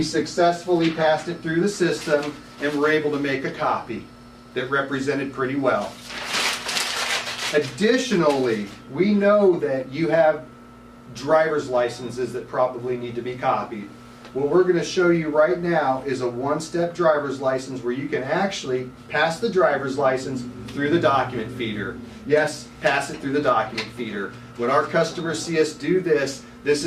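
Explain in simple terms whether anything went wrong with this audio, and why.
Nothing went wrong here: the signal holds steady the whole way, with no dropouts, glitches, distortion or other technical faults anywhere in the recording.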